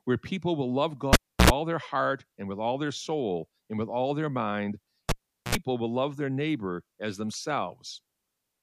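A live cable is pulled and plugged in twice, at 1.13 to 1.50 s and again at 5.09 to 5.55 s. Each time a pop cuts the speech to near silence, lasting about 320 ms and then about 410 ms, while the circuit is broken. As the plug goes back, its tip touches first and a 60 Hz mains buzz bursts through for roughly 80 ms and then 70 ms, before a second pop brings the speech back.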